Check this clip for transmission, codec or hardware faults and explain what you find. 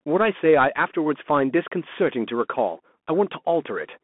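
One fault runs through the whole speech clip: the Bluetooth CVSD headset codec. The sound is squeezed into roughly 200 Hz to 3.4 kHz, with nothing above 3.8 kHz. CVSD codes each sample as a single up-or-down step, which fits a 64 kbps link. Its adaptive step can't keep up with fast changes, so s sounds turn scratchy and a grainy hiss sits under the speech. The damage is plainly audible.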